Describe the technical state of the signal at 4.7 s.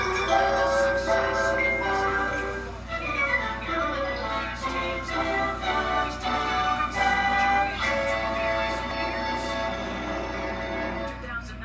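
Nothing at 4.7 s points to a technical fault; the signal there is intact.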